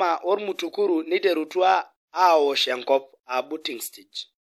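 From 3.61 to 3.65 s, pre-echo: codec noise spread across the block hisses for 45 ms before an attack, seen as broadband smear ahead of the transient.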